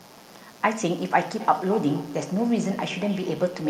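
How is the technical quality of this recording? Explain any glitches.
The recording is compromised by two faults: a constant buzz under the whole clip, and an echo loop from 1.4 s to the end.

Mains buzz, throughout: sharp switching spikes at twice the 60 Hz mains rate leak into the signal, giving a steady, raspy buzz roughly 30 dB below the speech.

Feedback echo between two devices, from 1.4 s to the end: a second device replays the call and this microphone picks it up again. Speech returns at intervals of about 200 ms, thinner and ringing, peaking about 13 dB below the speech.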